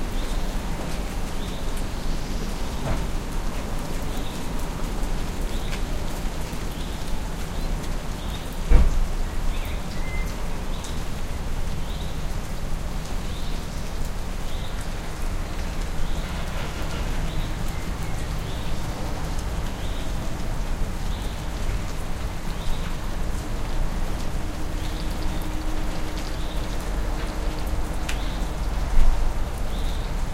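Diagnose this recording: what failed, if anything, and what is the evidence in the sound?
Nothing failed in this recording, and the sound gives no evidence of any fault.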